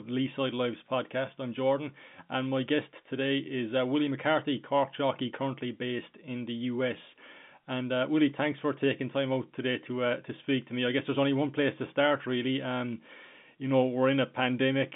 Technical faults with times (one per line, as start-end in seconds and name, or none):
none